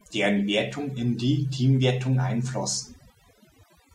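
Throughout the speech, overdone noise removal is at work: the noise reducer is set so aggressively that any frequency band close to its noise estimate gets pulled down or cut, quieter voice detail included. The background drops and breaks up into twinkling, warbling specks.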